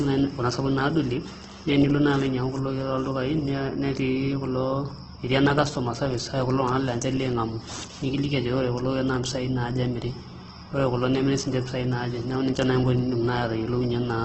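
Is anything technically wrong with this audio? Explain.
Yes. Throughout the speech, the sound is rough and grainy, and nothing is present above about 8.2 kHz. This is likely Opus compression in its music-style mode at a very low rate, around 12 kbps. The encoder keeps each band's energy but, short of bits, fills bands with folded or noise content, so the damage is heavy texture rather than the watery swirl and spectral holes of MP3.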